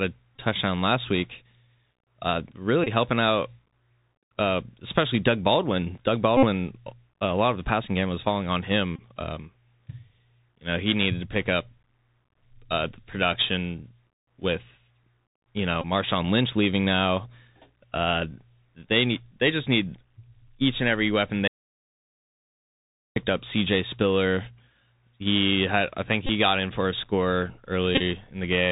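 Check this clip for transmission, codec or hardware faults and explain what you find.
Three faults are present: a Bluetooth CVSD headset codec colouring the whole speech clip, seven Bluetooth headset packet repeats, and one audio dropout to a faint residue.

Bluetooth CVSD headset codec, throughout: the damage is plainly audible. This one-bit delta coding with an adaptive step, consistent with 64 kbit/s CVSD, passes nothing above 4 kHz. S sounds turn scratchy, loud peaks distort when the step can't keep up, and granular hiss sits underneath. A spectrogram shows a hard ceiling at 4 kHz.

Bluetooth headset packet repeated, at 0.36 s (about 19 ms), 2.84–2.88 s just before "helping out" (about 23 ms), 6.37–6.45 s (about 56 ms, the longest), 8.96–9.00 s, 15.81–15.85 s, 26.27–26.31 s between "had I think" and "got in for a", and 27.95–28.01 s, where several short runs are scattered over 45 ms. 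In each case lost headset packets were replaced by re-decoding the last good one. Repeating every 3.75 ms produces a brief buzz near 267 Hz. On a spectrogram this appears as a comb of harmonics, and on the waveform as a periodic, stuttering pattern.

Audio dropout to a faint residue, 21.48–23.16 s, right after "each and every weapon": the speech cuts off abruptly for about 1.7 s, leaving only mains hum roughly 50 dB down. The likely cause is a lost signal link while the downstream input stayed live. The waveform shows a sudden flat gap, and the spectrogram shows only thin hum lines.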